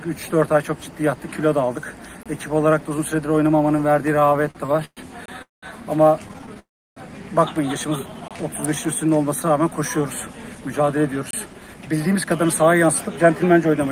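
Gap between chunks at 2.23 s: a 25 ms hole cuts into the sound. It recurs at 5.26, 8.28 and 11.31 s, every 3 s. The audio was delivered in 3-second pieces, and silence was left at each join without any sound being lost.

Repeated stalls (stutter) from 4.20 to 4.99 s: packets kept arriving late, so the jitter buffer emptied twelve times. The receiver stretched the last sound to cover each wait, the longest about 119 ms, filling a third of the span. The passage drags and catches, though nothing is missing.

Call audio freeze from 5.42 to 5.64 s: the sound hangs on a fading continuation, then drops into about 160 ms of silence before resuming where it stopped, most likely because packets were held up in transit and the buffer ran dry.

A second stutter runs from 6.28 to 6.57 s, with seven short stalls of 12 ms at most. A second freeze follows immediately, from 6.59 to 6.98 s, with about 330 ms of silence.

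Jitter buffer slow-down from 7.97 to 8.80 s: to rebuild its reserve, the receiver repeated pitch periods and added 109 ms. The sound runs at 87% speed at unchanged pitch, drawn out.

Jitter buffer speed-up from 10.55 s to the end: with too much audio queued, the receiver trimmed pitch periods to cut delay. The sound plays at 107% speed at the same pitch and feels slightly hurried.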